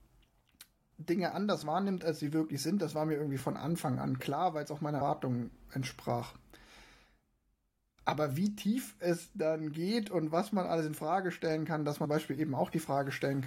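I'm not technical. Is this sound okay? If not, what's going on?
No. At 1.63 s, and at 3.40 s just after "das war mir irgendwie", the speech jumps forward slightly. This is likely a dropped buffer (overrun): the recording system fell behind, and roughly a hundredth of a second, then about half that, was lost and the ends joined directly.

At 5.00 s, after "weil es auch meiner", and at 12.04 s, after "stellen kann dass", there is a brief chirp or blip. That is damaged data in a compressed stream: the player misread corrupted bits and jumped to the next readable chunk.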